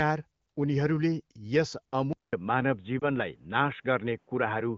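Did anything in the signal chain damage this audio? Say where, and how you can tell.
Yes. From 2.13 s to the end, the audio drops out for about 200 ms and then comes back band-limited, with nothing above 3.8 kHz and a new noise floor about 45 dB down at the same level. That's an input switched to a poorer device, likely a driver handing over to a narrower mic or headset profile.

At 2.99 to 3.08 s there's a quick dip, which fits a single lost AMR speech frame of 20 ms. That's on the radio/network side: the frame failed its checksum, so the decoder reused the previous frame's parameters at reduced gain. The AMR-WB coding at 15.85 kbit/s still sounds clear before the switch.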